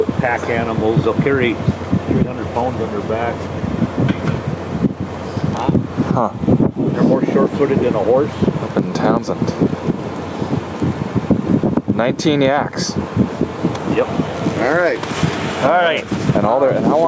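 Gain pumping runs through the whole clip. The level never settles. It ducks hard under each loud sound. The swing is large, around 15 dB. Loud and quiet parts sit squashed close together. The likely cause is input gain set far too high, with a fast limiter or compressor clamping it down on each peak. The call's microphone filtering trims the lowest bass, and nothing reaches above 8 kHz.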